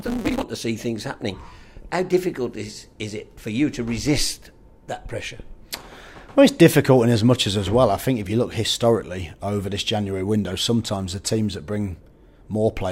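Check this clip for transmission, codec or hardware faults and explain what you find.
One fault, at the very start. From 0.0 to 0.43 s the sound carries a steady buzz at 188 Hz and runs hurried, about 1.88 times normal speed, yet keeps roughly its proper pitch. This is a block size mismatch (truncated): one stage hands over longer blocks than the next reads, which fits a 256-sample read, so the tail of each block is discarded. The skipped chunks speed the audio up, and each cut repeats at the block rate, producing the buzz.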